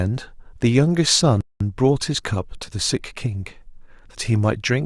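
At 1.41 s the speech just drops out and stays silent until 1.61 s, a gap of about 198 ms, before the audio picks back up. That's a playback stall: the output went dead mid-flow for long enough to notice. The likely cause is the player starving for data or its audio thread getting blocked briefly, so nothing reached the output until it recovered. It comes across as a sudden hole cut into the flow.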